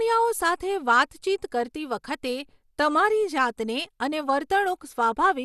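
From start to finish the speech has that dull, gurgly, granular edge, with nothing above 12.2 kHz, and it's likely MP2 compression at a starved rate, maybe around 80 kbps. Upper sub-bands get switched off while the survivors are quantised coarsely and flicker.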